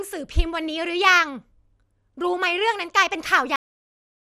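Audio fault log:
throughout: MP2 compression. The speech sounds dull and gurgling, with a granular roughness and nothing above about 15.1 kHz. The likely cause is MPEG Layer II coding at a low rate, around 80 kbps. The coder divides the spectrum into 32 sub-bands and, when bits run short, drops the upper bands entirely and quantises the remaining ones coarsely. That produces the missing top end and the plainly audible grainy distortion.
3.56 s: cut-off end. The speech stops abruptly partway through a sound and falls straight to digital silence for the remaining 0.65 s, with no natural decay or room tail. This happens when the final buffers of audio are never written out or played. The waveform simply ends at that sample instead of trailing off, so the sound is chopped short rather than finishing.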